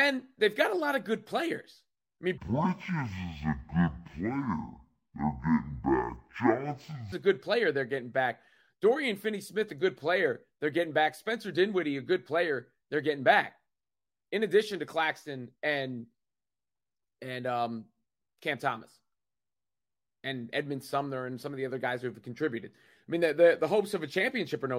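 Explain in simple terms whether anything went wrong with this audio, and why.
Stereo read as mono, from 2.38 to 7.12 s: the speech drops to half speed and sounds an octave lower. The left and right channels were played one after the other as a single track, stretching every moment of sound to twice its length.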